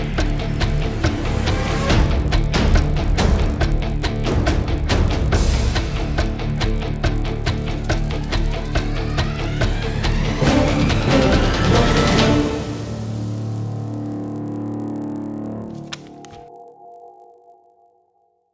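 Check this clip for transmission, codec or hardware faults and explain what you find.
There's one fault here, running the whole way through: the resampler restarted on every block. The audio's been converted in 20 ms chunks, with each chunk handled in isolation, so the filter never sees the real neighbouring samples at the edges and leaves a small error there. Those errors repeat at 50 Hz, so you get a low buzz riding on the sound that drops out in the gaps. It fits a 48 kHz to 16 kHz conversion.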